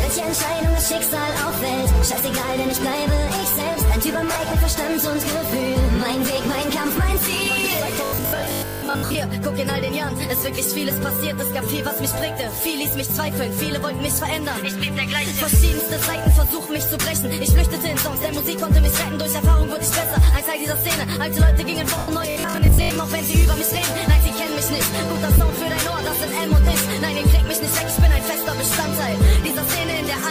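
At 4.34 s there's a 20 ms dropout consistent with lost LE Audio frames: the LC3 decoder patches the gap by replaying the last spectrum with scrambled signs, so it smears briefly. From 8.05 to 9.15 s you get robotic sound from repeated short buffers, a rigid 50 Hz metallic buzz, likely from 20 ms chunks looping while most of the real audio is skipped. At 21.98 s a longer 100 ms LE Audio frame loss smears and then fades away as the concealment gives out. Right after, from 22.30 to 22.96 s, the 50 Hz robotic buzz returns, with about half the audio replaced by repeats. A final 20 ms LE Audio dropout lands at 25.38 s.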